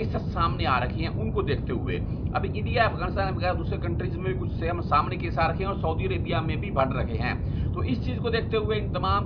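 No technical faults can be heard in this audio. Nothing in it needs a time mark or any further comment.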